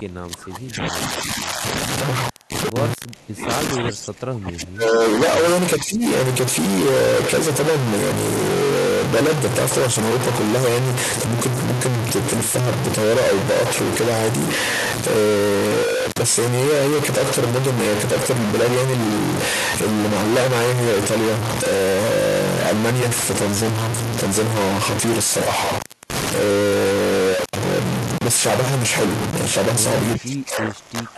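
Throughout, noise or distortion sits on the speech and pauses carry noise, likely a stuck bit in the converter or data line corrupting about half the samples. Speech suppressed in double talk is heard at 0.0–1.64 s, 3.14–3.5 s, 3.73–5.02 s, 5.78–6.03 s and 30.16 s to the end, dipping by up to about 25 dB, likely an echo canceller turning the talker down during overlap.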